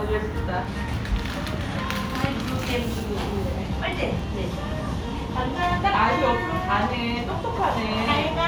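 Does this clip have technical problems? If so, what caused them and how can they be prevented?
Yes: blocks of digital silence at 0.65 s and 4.20 s, each under 2 ms (about 1.45 ms, or 64 samples, then about 0.77 ms), heard as brief ticks. The output buffer likely went unfilled, so the sound cut out abruptly without a fade, unlike a smeared concealment dropout. Prevent it by enlarging the audio buffer or lightening processing load.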